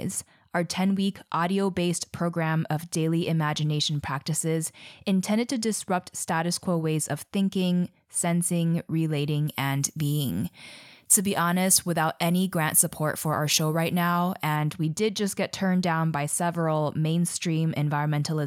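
Pre-emphasis left on affects this speech clip from 9.47 to 14.56 s, ending just before "we did just get". The treble boost applied for transmission, a curve matching FM 50 µs, was never undone by the matching de-emphasis, so 10 kHz sits about 10 dB high relative to 1 kHz, making the voice thin, bright and sibilant.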